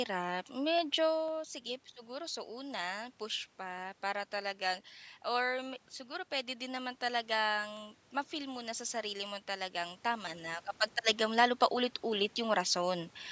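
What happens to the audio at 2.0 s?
Around 2.0 s the speech carries a regular tick, part of a steady train of clicks repeating every 0.5 s from 0.28 s to 12.77 s, about thirty in all. These are periodic USB or driver dropouts: something blocks the bus or audio driver on a fixed schedule, and each time a sliver of audio, well under a millisecond, is skipped outright. The waveform jumps across the gap, so the join clicks, and only while speech is present.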